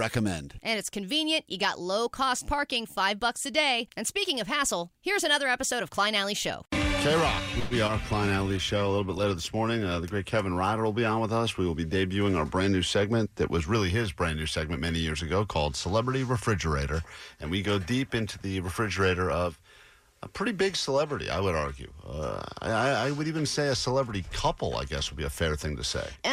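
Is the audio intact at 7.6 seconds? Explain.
No. From 7.59 to 7.74 s there is a call audio freeze: the last sound is stretched into a fading buzz or hiss for about 116 ms, then the audio resumes where it stopped, with nothing lost but everything after arriving 116 ms later. Delayed packets emptying the jitter buffer are the likely cause.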